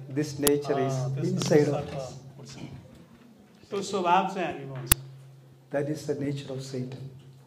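At 0.47 s and again at 4.92 s, a roughly 6 ms burst of harsh digital noise marks an uninitialised buffer: leftover memory played as samples, which fits a 256-sample block.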